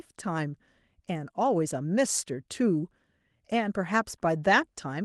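No technical faults can be heard in the speech. The Opus voice compression keeps the full audio band, which points to its hybrid mode at around 24 kbps, and leaves only light coding traces on the sound.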